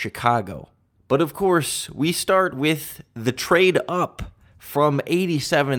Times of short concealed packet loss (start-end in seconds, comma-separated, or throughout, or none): none